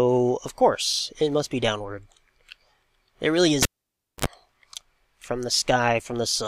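At 3.63 s a pop marks the cable pulled and plugged in: the signal drops to near silence for about 584 ms, then a 57 ms burst of 50 Hz mains buzz as the plug tip makes partial contact, and a second pop restores the sound at 4.26 s.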